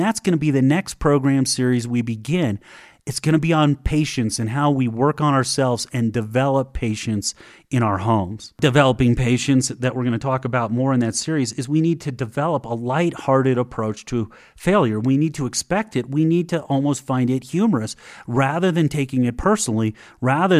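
No technical faults are audible.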